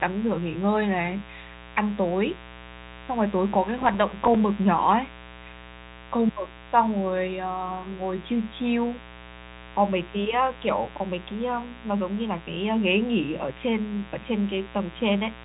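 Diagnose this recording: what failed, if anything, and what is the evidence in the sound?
Mains buzz, analogue wiring: a raspy 60 Hz buzz runs under the speech for the whole clip, about 20 dB down, from switching spikes twice per mains cycle leaking in.

Processor overload crackle, driver or buffer stage: from 3.78 to 4.35 s there's gritty tearing as around ten missed deadlines drop short silent gaps, which fits a buffer of roughly 3 ms.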